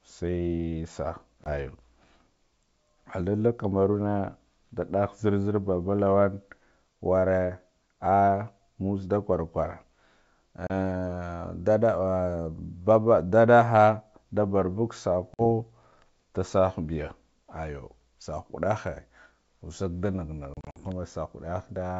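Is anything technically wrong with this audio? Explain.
Yes. There is packet loss on an ADPCM call, heard as hard-edged silent holes at 1.44–1.51 s (20 ms lost), 10.67–10.71 s (30 ms), 15.34–15.43 s just after "nda barbuga" (50 ms), and 20.54–20.78 s, where 130 ms goes missing in scattered runs of up to 50 ms. The lost packets are replaced by silence, and the receiving decoder's adaptive predictor and step size no longer match the sender's. Each time the sound resumes slightly distorted, then settles within some tens of milliseconds. That settling after each gap is what sets it apart from a simple dropout, which comes back cleanly. The underlying wideband coding is clear up to 7 kHz, which fits G.722 at 64 kbit/s.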